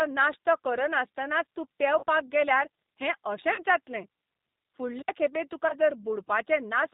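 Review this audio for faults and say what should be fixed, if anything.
The whole clip of speech carries G.729 codec damage, and it is plainly audible. The band stops at 4 kHz, so the speech sounds dull and boxed in. Each 10 ms frame is rebuilt from a vocal tract filter, a pitch predictor and a handful of pulses. That leaves a rough, slightly synthetic edge on every syllable. The sound points to G.729A at about 8 kbit/s. Carrying the call on a wideband codec such as G.722 or Opus would fix it.

VoIP packet loss concealed by the speech codec occurs three times: 1.99 to 2.04 s, 3.54 to 3.63 s, and 5.68 to 5.75 s. The first two gaps are 40 ms each. That fits two lost packets. The third is 20 ms, which fits one. The decoder fills each gap by repeating its last pitch and filter at falling gain. The result is a brief stretched, fading smear. Weak, distorted speech lingers after each gap while the decoder recovers. 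A jitter buffer with forward error correction, or a less congested network path, would prevent it.

An intermittent contact opens from 4.99 to 5.11 s. The sound cuts out for about 62 ms. There is crackle at each edge as the connection breaks and remakes. This is a loose cable or plug, not a network problem. Reseating or replacing the connector on the capture side would stop it.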